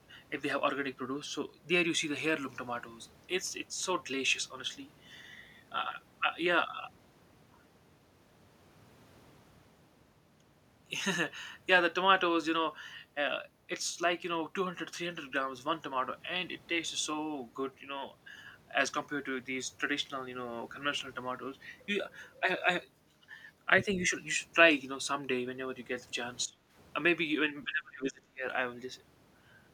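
A speech recording with speech suppressed in double talk near its end. The level dips briefly from 24.10 to 24.14 s, a shallow drop of around 5 dB. It falls much harder from 26.45 to 26.59 s and again from 27.64 to 28.45 s, by roughly 25 dB, nearly cutting out. The likely cause is an echo canceller that could not separate the talker from loudspeaker echo, and so attenuated both.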